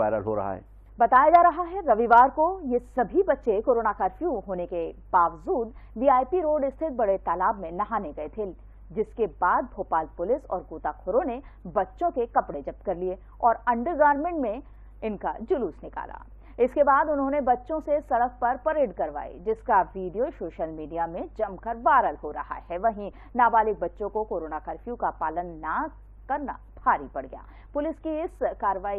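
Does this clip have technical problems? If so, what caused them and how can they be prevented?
Yes. DAB burbling occurs from 16.22 to 16.32 s. Weak reception let bit errors, around 0.1 percent, slip past error correction. Corrupted audio data put short blips of noise into single sub-bands across eight frames. A better antenna or a stronger signal prevents it.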